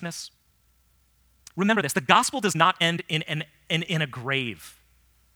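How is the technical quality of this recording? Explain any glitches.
The recording has one clear fault, a time-stretched section at the very start. From 0.00 to 3.24 s the speech runs about 1.7 times faster than normal, then drops abruptly to a natural pace. This is likely software compressing the passage to fit a shorter length, dropping small slices of audio to keep the pitch unchanged. The result sounds rushed. Unlike a sped-up tape or playback-rate error, the voice doesn't rise in pitch or sound chipmunk-like. Only the timing changes.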